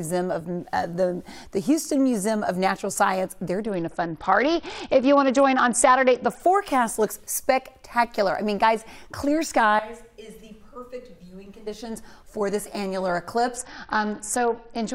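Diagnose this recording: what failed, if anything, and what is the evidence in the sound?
Bluetooth SBC bit pool drop at the codec stage: link congestion forced the encoder onto far fewer bits, which fits a pool near 8 at about 66 kbps. From 3.63 to 6.40 s and from 13.56 s to the end, the treble dulls and gritty noise rises.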